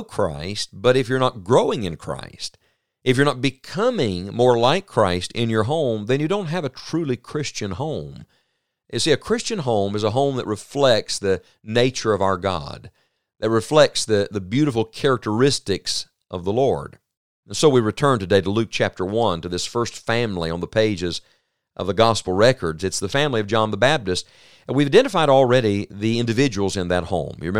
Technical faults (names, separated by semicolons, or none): none